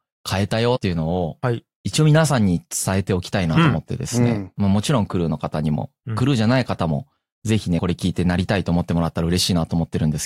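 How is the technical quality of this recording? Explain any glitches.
The recording has four brief dropouts where compressed frames were skipped, at 0.75–0.77 s, 3.56 s, 7.79 s and 9.19 s. At each point the decoder drops a few whole frames, which cuts roughly 70, 50, 50 and 10 ms of speech. On a waveform the speech envelope jumps abruptly. On a spectrogram the harmonics shift position suddenly at each join.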